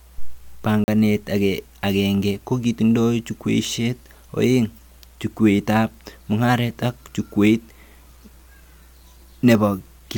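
At 0.84 s there's a block of digital silence running to 0.88 s, a 40 ms hole where the sound simply drops out. The output buffer most likely wasn't filled in time, so the speech cuts out hard and comes back with no fade.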